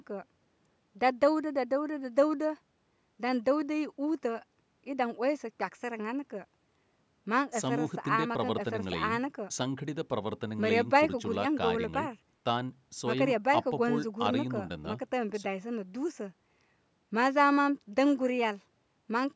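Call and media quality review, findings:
No faults found in the speech; the call microphone processing behaves as expected, with its high-pass filter taking out the lowest bass and no content above 8 kHz.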